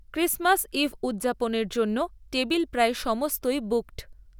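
A resampler restarted on every block, converting each 50 ms chunk of this speech clip in isolation, which fits a 44.1 kHz to 48 kHz conversion. Each block edge therefore carries a small error, heard from 0.9 s to the end as regular ticks at 20 Hz that sound only while signal is present.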